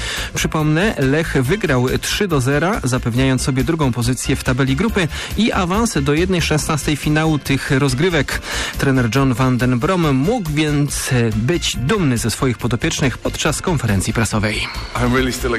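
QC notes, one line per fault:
0.35–14.69 s, clock drift buffer slips: a click recurs at a steady interval of 1.02 s while sound is present, about fifteen in all. The likely cause is two devices running on independent clocks that disagree by something on the order of 150 ppm. The buffer between them gradually fills or drains until a few samples are dropped or repeated at once, and each of those abrupt jumps in the waveform is heard as a tick.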